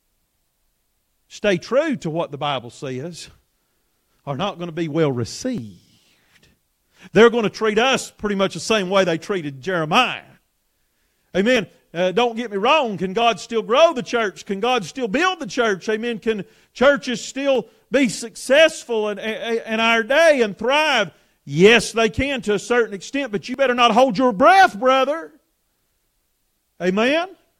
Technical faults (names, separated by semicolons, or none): audio missing between chunks